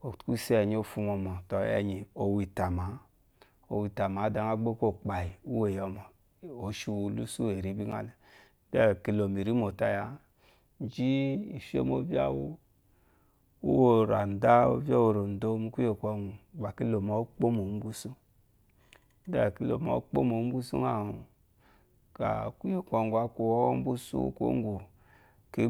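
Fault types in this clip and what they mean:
Block of digital silence: Two brief clicks, each a tick or dip in the speech, at 5.29 s just before "uweyo mo" and at 7.92 s just after "losu eri". The signal cuts out and returns with no fade. The first gap is 5.8 ms, which fits a 256-sample buffer left unfilled. The second gap is 8.7 ms. Both gaps come from output samples replaced by zeros.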